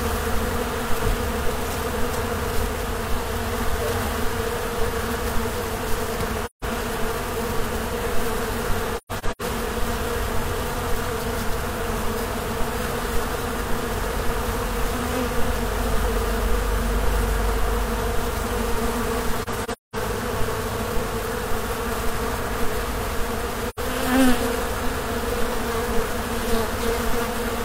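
AAC frame loss with muting occurs at 6.45–6.64 s, 8.97–9.42 s (scattered gaps, longest about 150 ms), 19.42–19.96 s (longest about 200 ms) and 23.69–23.79 s. The decoder zeroed missing frames, consistent with roughly 43 ms frames, so the sound fades into soft-edged silences.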